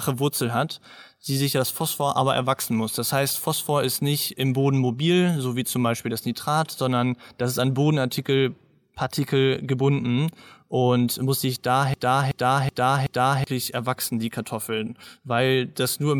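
At 11.94 s, right after "gebunden und muss sich", the speech falls into a broken-record loop lasting until 13.47 s, where it resumes with "erwachsen die". A 0.38 s fragment plays four times back to back, stuttering mechanically, and whatever speech belonged in that span never arrives. The likely cause is a stalled player or stream resending its last held buffer. On a spectrogram the loop shows as four identical blocks in a row; the waveform repeats exactly.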